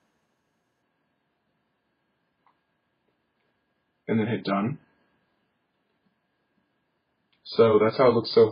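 At 0.82 s the audio drops abruptly to an adaptive stream at a lower bitrate, with no gap. Nothing remains above 5 kHz, and artefacts thicken, which fits a switch from roughly 128 to 16 kbit/s MP3.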